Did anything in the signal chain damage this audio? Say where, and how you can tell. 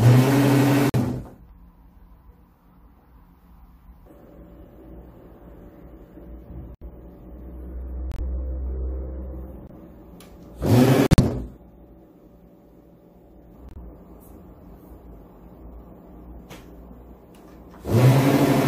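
Yes, at the codec stage. The fault is corrupt frame muted. The sound drops to silence six times, at 0.89–0.96 s, 6.75–6.83 s, 8.11–8.20 s, 9.67–9.71 s, 11.07–11.20 s and 13.69–13.78 s. The gaps run from 42 to 135 ms. Each one cuts in abruptly, and their lengths fit a few short codec frames. Bit errors damaged those frames, so the decoder rejected them. Playback filled the holes with silence. The sound resumes on schedule, with no timing shift.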